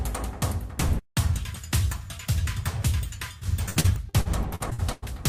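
From 3.39 to 5.04 s, repeated packet loss gives the sound a choppy, robotic quality. Ten gaps, the longest 99 ms, were patched by extending the preceding audio. On a spectrogram, smeared, frozen-looking frames alternate with abrupt vertical breaks.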